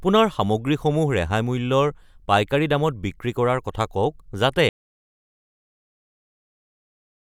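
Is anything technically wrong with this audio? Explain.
Yes. An audio dropout to silence begins at 4.69 s, just after "কৰাৰ কথা কওক যাতে", and runs to the end. The input was likely lost, through a disconnected source, failed link or mute, while recording continued writing silence. The speech cuts off abruptly into total silence, with no room tone.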